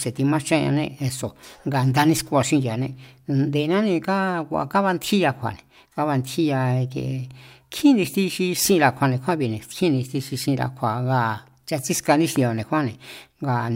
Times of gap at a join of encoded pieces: none

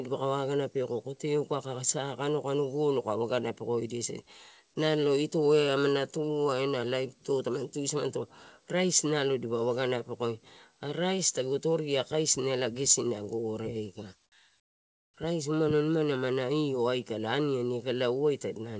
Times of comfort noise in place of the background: 14.60-15.14

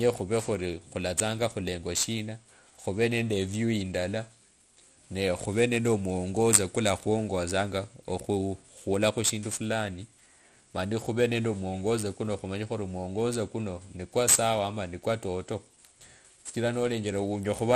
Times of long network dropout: none

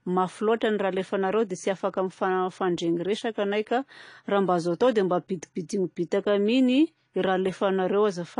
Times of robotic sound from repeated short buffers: none

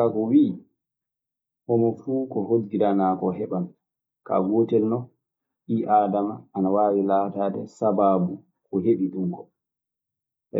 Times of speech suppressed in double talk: none

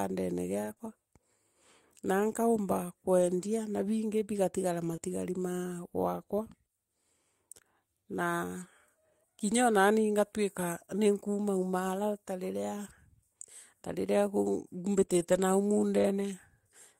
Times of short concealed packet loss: 10.85-10.89, 15.05-15.19

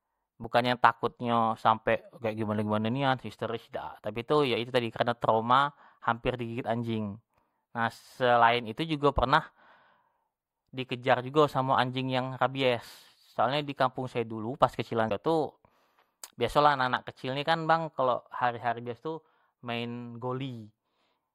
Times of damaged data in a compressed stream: 15.06-15.11

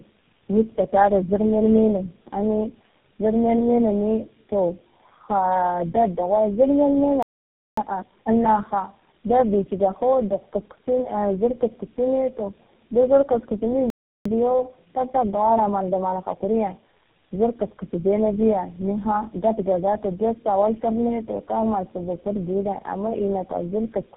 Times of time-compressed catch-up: 7.77-8.31, 14.25-17.25

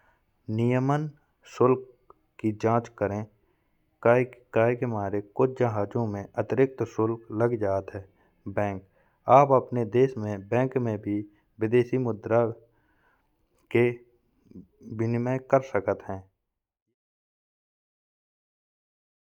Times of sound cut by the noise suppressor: none

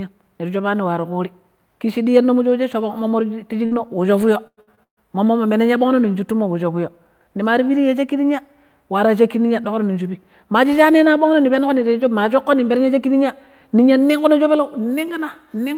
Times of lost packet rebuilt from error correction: 2.49-2.51, 2.97-2.99, 3.71-3.73

